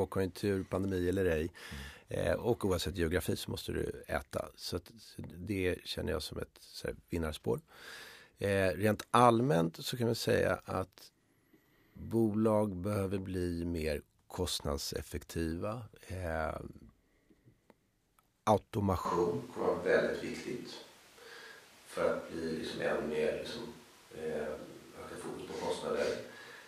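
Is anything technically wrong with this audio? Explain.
Yes. From 19.05 s to the end, the speech abruptly turns roomy and hollow, with thinner bass and more audible background noise, roughly 25 dB below the speech, while the overall level stays about the same. The likely cause is a switch to a distant microphone. The close microphone's feed dropped out or was left out, and a microphone further away picked up more room reflections and ambient noise, while losing the bass boost of close placement.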